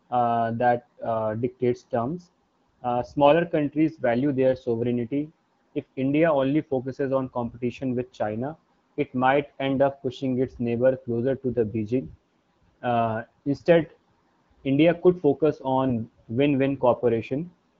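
AMR bit errors corrupt the AMR-WB stream twice, with a bit error rate of around 7 percent in the less protected bits while the checks on the critical bits still pass. From 13.82 to 13.90 s, an 86 ms burst, the excitation pulses land in the wrong places and the fine pitch, gain and spectral values drift, so the speech briefly turns hoarse and gargly at roughly its normal pitch and level. The same scratchy roughness returns from 15.88 to 15.92 s, just after "could focus".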